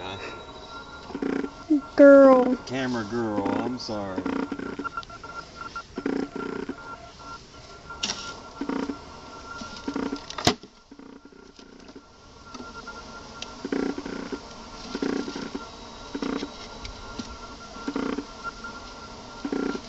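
Nothing in this audio stands out as a technical fault; it just runs along without any trouble you'd notice.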